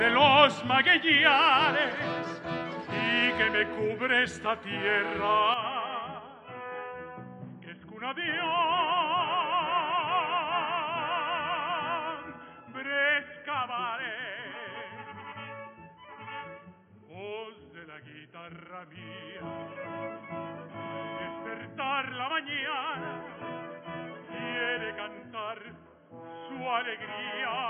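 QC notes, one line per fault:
5.54 s to end: input switched to a poorer device. Sound abruptly turns dull and boxy, nothing above 3.3 kHz, slightly quieter, no gap; likely a narrowband input took over.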